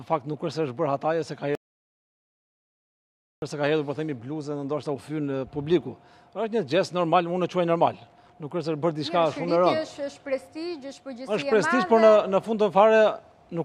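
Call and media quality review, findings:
Audio dropout to silence, 1.55 to 3.42 s: sound cuts mid-flow, 1.87 s of silence, no room tone, content lost. Likely input loss upstream, with the encoder writing silence. Unlike a gate or noise suppressor, no residual floor and no fade.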